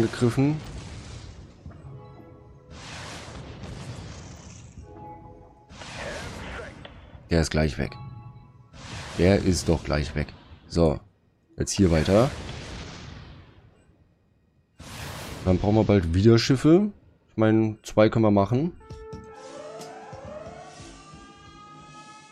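At 10.93 to 11.01 s, a corrupt frame decoded: damaged data spanning a few frames plays as a brief chirp, squeak, blip or burst of noise, a smeared vertical blotch on the spectrogram, peaking around -40 dBFS.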